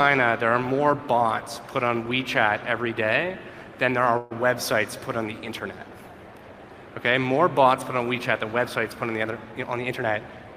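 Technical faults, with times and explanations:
4.17 to 4.33 s, call audio freeze: the sound stalls for about 0.13 s, with the last moment of audio stretched into a short buzzy tail before the stream picks up again exactly where it left off. Nothing is lost; instead a gap of roughly 133 ms is inserted, pushing everything after it later by that amount. This pattern is likely the jitter buffer running dry while packets were held up in transit, with the receiver filling the wait by extending what it last had.
9.52 to 10.52 s, jitter buffer speed-up: over this final second the audio runs noticeably quicker, at about 111% of normal rate, yet the pitch stays put, giving a hurried feel. The receiver's buffer was holding more than its target, the kind of backlog left after late packets arrive in a burst, so it trimmed many tiny pitch-period slices in succession, cutting roughly a tenth of a second to bring the delay back down.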